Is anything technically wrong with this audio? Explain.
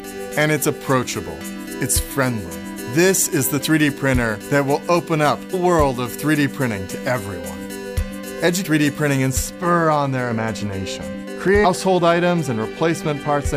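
Yes, there are two faults. From the start to 9.3 s, pre-emphasis was left on. The treble boost applied before transmission, matching the FM 50 µs curve, was never undone by the complementary cut. Content near 10 kHz sits about 11 dB higher relative to 1 kHz than it should, so the sound is thin, bright and hissy with exaggerated sibilance. On a spectrogram the upper band looks unusually dense and bright up to 9.3 s, then visibly darker afterwards.

Damaged data in a compressed stream shows up three times: at 5.53 s, from 8.64 to 8.66 s, and from 11.64 to 11.66 s. In each case corrupted bytes caused the decoder to misread frames and lose sync while it hunted for the next valid header. Each one is heard as a brief chirp, squawk, click or short hole. On a waveform they appear as short, abrupt discontinuities, and on a spectrogram as thin vertical streaks of broadband or oddly patterned energy lasting about 20 ms at most.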